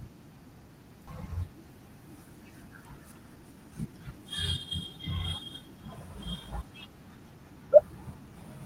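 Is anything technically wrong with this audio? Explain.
Yes, this speech clip has two faults.

At about 1.07 to 1.09 s there is a skip ahead: the speech jumps forward with no gap, and roughly a second of audio is simply missing. That stretch was dropped in transit or discarded by an overflowing jitter buffer, so playback joined the audio on either side almost directly.

From 2.97 to 4.14 s the speech sounds hurried, running at about 112% speed while the pitch stays unchanged. This is a jitter buffer speed-up. The buffer was holding more audio than it aims for, so the receiver trimmed many short pitch-period slices, removing around 150 ms in total.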